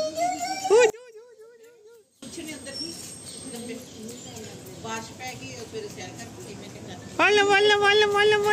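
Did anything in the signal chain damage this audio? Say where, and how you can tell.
Yes. From 0.9 s to 2.23 s the sound collapses to a faint, thin remnant, about 27 dB down, with the solid centre and low end nearly gone. That points to one channel inverted, likely a polarity-swapped lead in the analogue wiring: summed to mono, the shared content cancels and only the channel difference survives.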